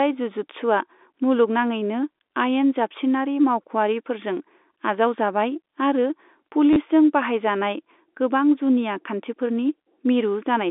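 Packet loss with last packet repeated hits this speech recording from 6.73 to 6.76 s, just before "बाहायजानाय गोबां": about 30 ms went missing and the receiver replayed its last packet to fill the gap, giving a brief robotic stutter and a buzz that fits 10 ms packets, heard through G.711 telephone band-limiting.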